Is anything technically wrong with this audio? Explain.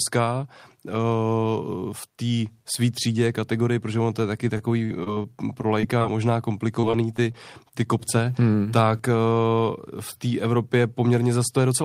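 Yes. The speech has two kinds of network fault, both of them lost or late packets that the receiver patched over.

Repeated packet loss, giving a robotic sound, runs from 4.57 to 5.26 s, right after "on to je taky", and again from 6.80 to 7.36 s, just before "ty kopce hmm tak". In each stretch four gaps of audio failed to arrive in time. The longest was 45 ms in the first run and 25 ms in the second. The decoder filled each one by extending the preceding sound. The filled audio makes up about 15% and 13% of those spans. The holes come in close succession, so the speech turns choppy, with pieces missing where fragments are synthetic.

Short concealed packet loss occurs twice as isolated events, at 5.81 to 5.85 s and at 5.99 to 6.02 s. Each lost about 20 ms. The receiver bridged the hole by continuing the last waveform, pitched if the sound was voiced and shaped noise if it was not, then crossfaded back into the real signal. 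Each is heard as a brief smear or wobble, and a short consonant at that point can drop out.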